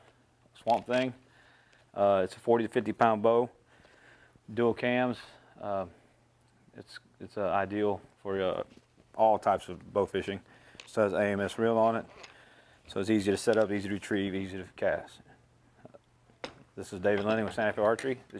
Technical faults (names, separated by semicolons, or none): none